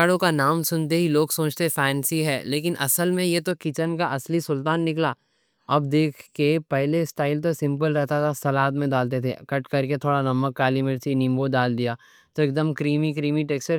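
A speech clip whose opening stretch, from 0.0 to 3.51 s, has pre-emphasis left on: the treble was lifted along a curve matching the FM 75 µs standard, and the complementary de-emphasis was never applied. Highs sit about 14 dB hotter at 10 kHz than at 1 kHz, so the sound turns thin, glassy and sharply sibilant. On a spectrogram that section shows markedly denser energy above roughly 2 kHz, with sibilants flaring bright, and the brightness drops away after 3.51 s.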